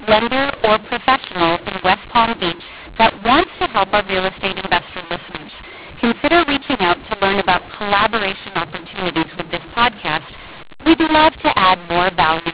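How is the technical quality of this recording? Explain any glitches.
The recording has one fault, present for its whole length. Throughout, mu-law and A-law are mixed up. The telephone speech was coded with G.711 A-law but decoded as mu-law, so each 8-bit code is read against the wrong logarithmic curve. Levels come out scrambled: some samples too loud, others too soft. The quietest samples are lifted well above silence, making the speech harsh and distorted and filling pauses with noise. The 8 kHz telephone sampling and its 4 kHz bandwidth limit are intact.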